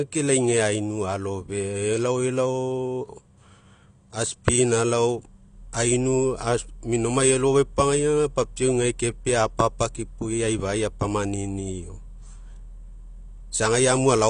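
From start to finish the speech sounds dull and smeared, with nothing above about 9.8 kHz and a warbling, fizzy edge on sibilants and held sounds. This is likely AAC compression, with low-bitrate quantisation lowering the cut-off, which fits AAC-LC at around 32 kbps.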